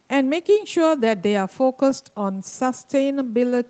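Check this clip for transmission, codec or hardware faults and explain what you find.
One transmission fault stands out, scattered short gaps, between 1.9 and 2.53 s. About five lost or late packets, each roughly 10 ms, were patched by extending the preceding sound. They cause brief ticks and smears rather than one long dropout or outright silence. The call path's band limit, with nothing above 8 kHz, fits an Opus call stream.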